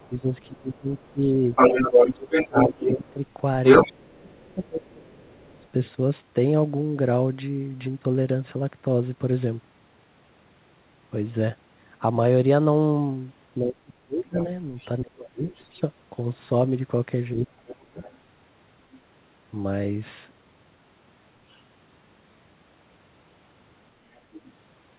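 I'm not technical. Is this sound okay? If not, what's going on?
No. Two things go wrong, both likely caused by the call's echo control. First, the other side's voice is leaking through: it is louder than the talker from 0 to 5.7 s, faint at 14.4 to 15.7 s, 17.7 to 19.0 s and 21.5 s, and just below the talker's level from 24.2 s to the end.

Second, speech is suppressed in double talk. When both people talk at once, the talker's own voice gets pushed down too. This happens in pieces between 0.1 and 5.7 s, and again at 13.6 to 15.4 s and 17.3 to 18.0 s. The voice sinks very low or briefly vanishes.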